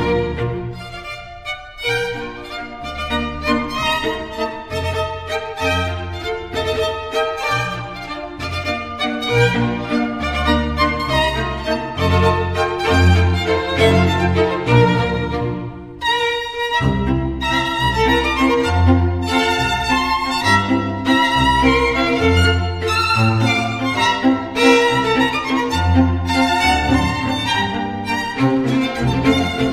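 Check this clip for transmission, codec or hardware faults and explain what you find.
There is one fault, a channel delay (comb filtering), from 7.52 s to the end. One channel lags the other by roughly a single sample, and summing them to mono cancels content near 20 kHz, so the very top end sounds dulled.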